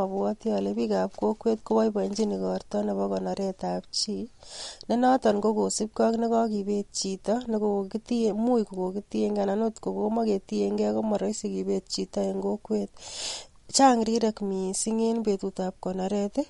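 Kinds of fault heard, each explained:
MP3 compression: Throughout, the speech has plainly audible codec damage and no content above 11.2 kHz, so sibilants lose their top. This is likely MP3 encoding starved of bits, which fits a bitrate around 48 kbps, where the encoder cuts the treble and drops weak frequency detail.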